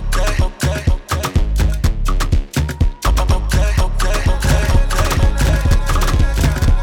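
At 4.28 s a doubled audio track begins abruptly and runs to the end: a second, full-band copy of the sound enters about a second behind the original and roughly as loud, with no decay or room colour. The likely cause is a second capture through a slower path. On a waveform, every event reappears about a second later at similar amplitude; a spectrogram shows matching patterns offset horizontally, with an abrupt start and no smearing.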